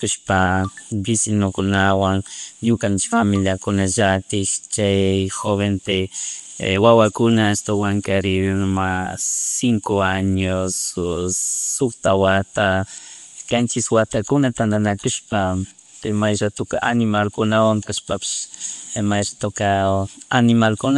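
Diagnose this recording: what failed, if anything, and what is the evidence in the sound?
The fault is at the codec stage and runs through the whole clip. Nothing survives above 11.5 kHz, and the speech carries plainly audible coding damage. That's likely Bluetooth LC3 compression, with its transform encoder trimming the upper spectrum, which fits a 48 kbps stream in 10 ms frames.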